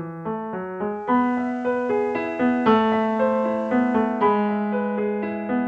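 A hybrid radio receiver lost its digital signal and fell back to the station's FM broadcast, which is digital radio blending to analogue, starting at 0.87 s and blending back to digital at 4.40 s. Each cross-fade takes 0.46 s. While on FM, the level shifts by about 3 dB, and a layer of hiss sits roughly 40 dB below the signal.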